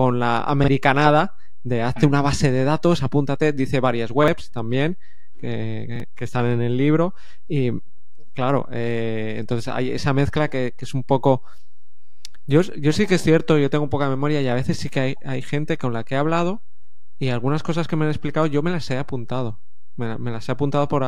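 A DC offset runs through the whole speech clip: the waveform sits shifted off zero by a constant amount. You won't hear it as such, but it eats headroom and shows up as steady energy right at the bottom of the spectrum.

Then there are three short repeated-buffer stutters, at 0.64 s, at 4.24 s just after "datos apúntate dice varias", and at 5.96 s just before "están en el libro". Each time the device ran dry and replayed its last chunk once. The repeats last about 40 ms, which fits a 40 ms buffer, and each join is hard. Roughly 40 ms of fresh audio goes missing each time, so it comes across as a quick hiccup or click.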